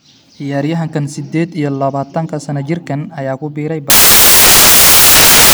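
From 3.9 s, right after "jirkaan ayaa ku biiray", the speech turns into loud, harsh broadband noise that runs to the end at 5.53 s. These are samples built from the wrong bytes: misassembled byte order or alignment pushes the rapidly changing low bits into each value's high end.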